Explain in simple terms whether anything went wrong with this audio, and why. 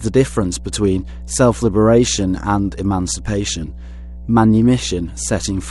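Something did go wrong: a mains hum runs under the speech from the very start to the very end. It is a steady, low tone at 60 Hz, picked up from the electricity supply through a ground loop or a nearby transformer, and it is loud enough to be clearly heard beneath the talking. Unlike wind or handling rumble, it never wobbles or changes. It holds one fixed pitch the whole time, which points to the power line.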